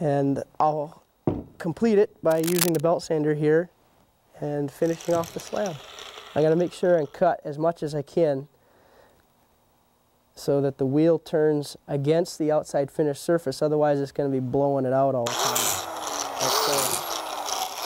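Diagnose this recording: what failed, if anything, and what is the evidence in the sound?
The failure sits in the analogue wiring. From 2.29 to 2.80 s a dense, irregular scratching and rustling lies over the sound, only a few dB below it, for about half a second. The likely cause is cable scratch noise: a worn cable, plug or control being moved, its contact resistance flickering and injecting uneven noise bursts. Unlike a digital dropout or buffer click, it is a cluster of rough, jittery texture, not a clean isolated tick or gap.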